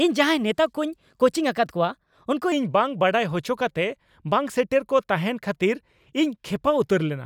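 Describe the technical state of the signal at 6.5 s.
At 6.5 s the speech signal is intact, with no dropout, distortion, glitch or other technical fault.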